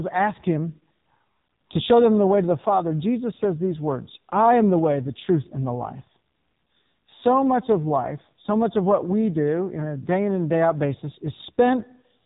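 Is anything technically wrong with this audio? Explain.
Yes. There are two faults.

Throughout the clip, the speech has passed through the AMR narrowband mobile codec, the AMR-NB speech coder used on 2G and 3G calls. Nothing above about 3.8 kHz survives, so the sound is muffled and phone-like. The codec models the vocal tract and excites it with only a few pulses per short block. Here the damage is heavy. The voice sounds buzzy and synthetic, which fits one of the codec's lowest modes, around 5.9 kbps.

At about 7.27 s, just before "much of life so", there is a brief moment of hard clipping. A peak reached the ceiling of a stage in the chain, overdriven by about 0 dB. Its top was cut flat. Those squared tops add high harmonics, and the result is a single short crackle on that loud moment, not a sustained fuzz.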